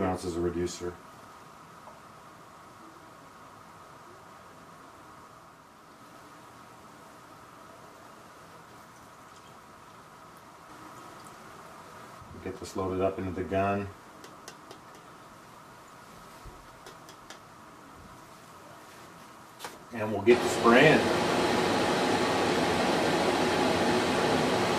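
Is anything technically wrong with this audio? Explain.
No, no technical faults.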